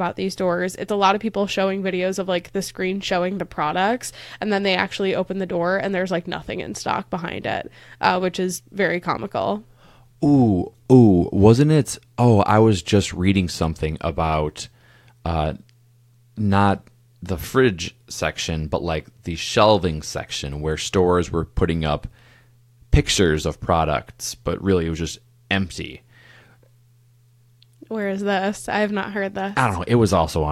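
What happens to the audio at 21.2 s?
Nothing goes wrong at 21.2 s; the speech carries straight through that moment with no dropout, click, distortion or other fault.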